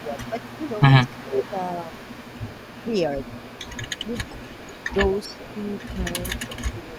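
From the start and for the whole clip, a faint copy of the speech trails the original by 393 ms, about 25 dB below it. This is an echo leak, likely a far-end echo canceller passing loudspeaker pickup back. Unlike the suppression described below, it adds sound rather than removing it.

At 0.0 to 0.63 s, 1.2 to 1.93 s and 6.37 to 6.94 s, the speech itself dips, by about 5 dB, then about 10 dB, then about 5 dB, for roughly a third of a second each time. This is speech suppressed in double talk, likely the canceller ducking the talker while both sides overlapped.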